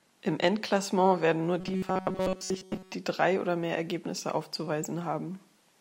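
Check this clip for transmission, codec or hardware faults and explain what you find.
One fault is audible: robotic sound from repeated short buffers, from 1.61 to 2.94 s, between "werden nur" and "die drei oder mehr". The speech turns into a rigid metallic buzz near 188 Hz, which points to audio arriving too seldom. The likely cause is a stretch of about 5.3 ms being looped in place of missing input, skipping most of the real audio. A spectrogram shows evenly spaced horizontal lines at multiples of 188 Hz, and the waveform shows one short shape repeating.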